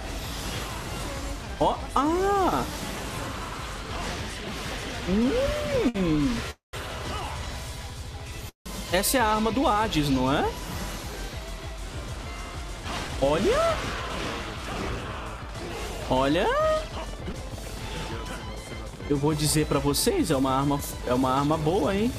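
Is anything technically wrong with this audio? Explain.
Yes, there are several network-related faults. At 5.89 s a short stall from a late packet holds the sound for 59 ms while the jitter buffer waits; the waveform shows a smeared, repeated stretch with no gap. Call audio freezes at 6.51 to 6.75 s and 8.49 to 8.68 s, likely from packets held up in transit, stretch the last sound into a fading buzz, then about 140 ms and 120 ms of flat silence on the waveform. Jitter buffer speed-up from 12.84 to 15.44 s (106% speed, roughly 150 ms removed) and 18.56 to 20.42 s (104%, roughly 70 ms) trims pitch periods repeatedly, so the audio runs faster at unchanged pitch, sounding hurried in the first stretch, with tiny splice points on the waveform. Short concealed packet loss at 17.32 s loses 20 ms and fills 12 ms with synthesized continuation, heard as a brief smear or wobble and seen as a blurred vertical seam on the spectrogram.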